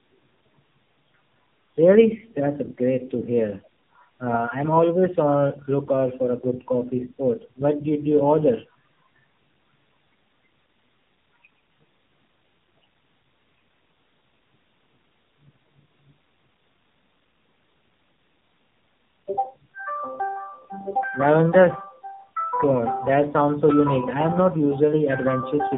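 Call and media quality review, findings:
Tandem speech coding across the whole clip: rough, muffled, warbly speech, bandwidth ending near 3.8 kHz. Two low-rate speech codecs in series, consistent with an iLBC leg transcoded into AMR-NB, the second re-encoding the first's artefacts. Probable component: gateway transcoding at network borders.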